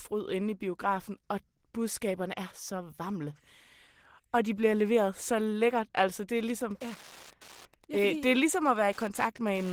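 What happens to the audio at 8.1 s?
At 8.1 s you're in the middle of a stretch of Wi-Fi interference that starts at about 6.37 s and runs to the end of the clip at 9.73 s. A nearby radio's transmissions get rectified by the audio circuitry, so you hear a steady tick every 102.4 ms, around ten a second, sitting roughly 25 dB below the speech.

Under that, the Opus voice compression that runs through the whole clip is plainly audible. The sound points to hybrid mode at something like 16 kbps, with the linear-prediction coder handling the low band and a transform layer above 8 kHz. That coarse coding leaves the speech slightly muffled and hoarse, with a faint robotic edge, even though the content reaches about 20.3 kHz.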